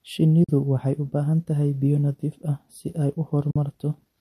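AAC frame loss with muting occurs twice in the speech, from 0.44 to 0.49 s and from 3.51 to 3.56 s. Each time the decoder zeroes about 50 ms of spectrum, which fits five short frames of the low-delay codec, likely AAC-ELD. Overlapping windows fade the sound out and back in, leaving soft-edged holes.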